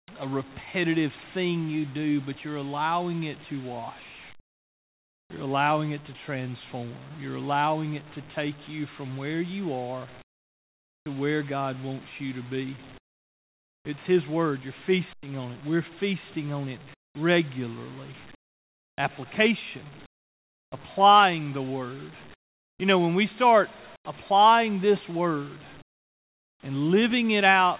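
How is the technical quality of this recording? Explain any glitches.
The call path stops at 4 kHz, which fits G.711 coding, and the pauses carry comfort noise in place of the background at 0.0 to 0.08 s, 10.22 to 11.06 s, 12.98 to 13.85 s, 16.94 to 20.72 s, 22.34 to 24.05 s and 25.82 to 26.63 s. In those gaps the real room tone becomes a steady, featureless hiss, about 13 to 22 dB quieter where the drop can be measured. This is likely discontinuous transmission, with the receiver synthesising noise while the sender goes silent.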